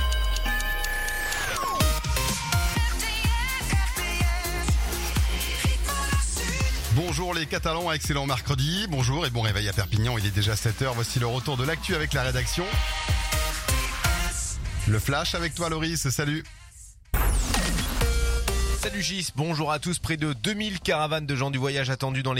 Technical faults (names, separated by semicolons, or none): none